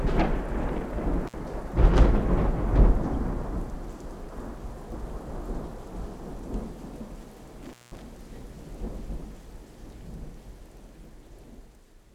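At 1.27 s the sound drops out briefly. This is an intermittent contact: a loose cable or plug lets the connection open for a moment. Crackle marks both edges of the gap, which runs to 1.34 s. The line is open for about 50 ms, leaving only faint hiss. It happens again from 7.63 to 8.02 s. This time the dropout is longer, about 189 ms. Crackle again frames the break, with hiss in between.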